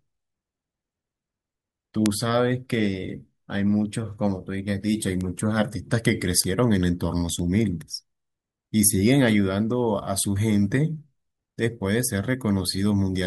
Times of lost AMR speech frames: none

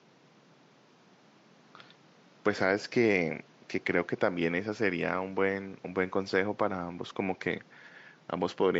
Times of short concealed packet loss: none

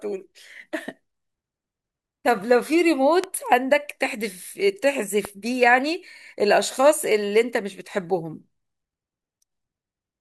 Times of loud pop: 3.24-3.26, 5.25-5.27

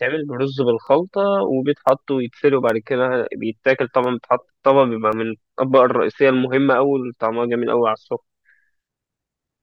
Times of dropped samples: 0.87, 1.89, 2.69, 4.04, 5.12

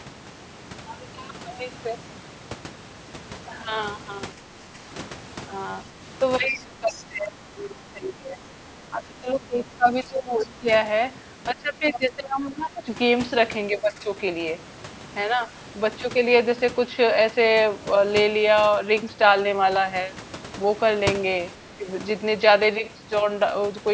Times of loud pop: none

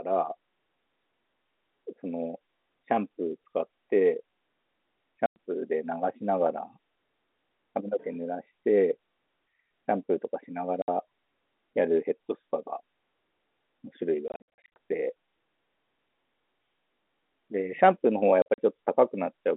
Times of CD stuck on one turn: none

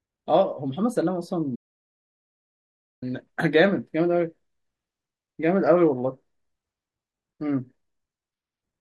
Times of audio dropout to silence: 1.56-3.02

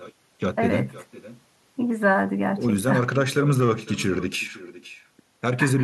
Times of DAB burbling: none

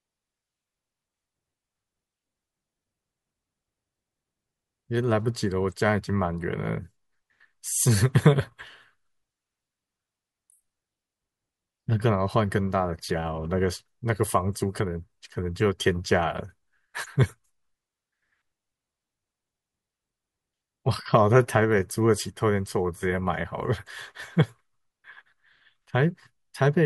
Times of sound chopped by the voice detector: none

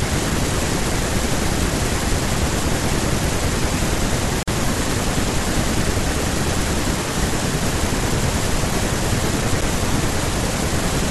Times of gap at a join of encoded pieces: 4.43-4.48

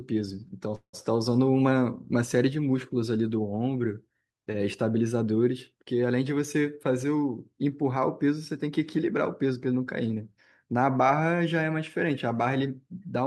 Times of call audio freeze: 0.75-0.95

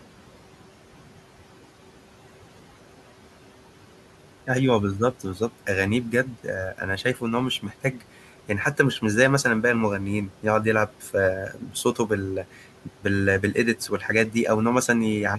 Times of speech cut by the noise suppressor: 6.25-9.45, 10.28-14.35

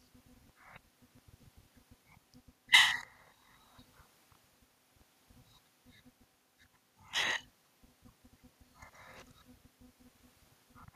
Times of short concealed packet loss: none

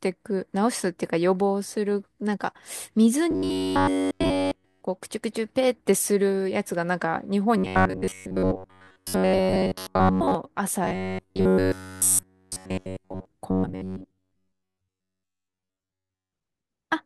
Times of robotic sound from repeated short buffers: 3.31-4.85, 7.57-10.35, 10.85-13.25, 13.51-16.33

